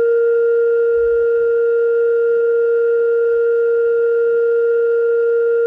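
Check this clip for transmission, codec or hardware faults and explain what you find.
I find no faults to explain in this music clip.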